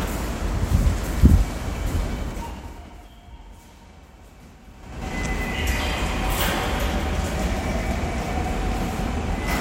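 From 4.74 to 5.11 s a ticking zipper noise rides on the sound as its level changes by roughly 20 dB in unsmoothed 5 dB steps, about ten per second.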